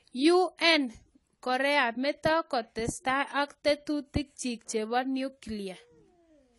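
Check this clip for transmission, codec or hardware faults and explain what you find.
There's one fault, and it runs through the whole clip: AAC compression, likely AAC-LC at a low bitrate, perhaps around 32 kbps. Nothing survives above 11.5 kHz, so the speech sounds dull, with a smeared, fizzy edge on sibilants.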